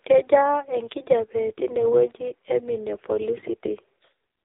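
A filter restarted on every block runs through the whole clip. The filter loses its memory at each block boundary and starts from silence, so every block opens with a small click. At 345 Hz these clicks merge into a steady buzz that rises and falls with the speech level, which fits a 128-sample block.

The AMR narrowband mobile codec also shapes the entire clip. Nothing above 3.8 kHz survives, so the speech sounds thin and boxy. The vocal-tract model, fed with very few pulses, leaves heavy damage: a buzzy, synthetic quality that points to a low mode such as 6.7 kbps.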